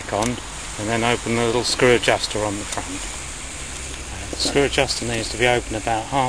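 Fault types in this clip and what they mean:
Nothing stood out on listening; no fault could be heard anywhere in the audio.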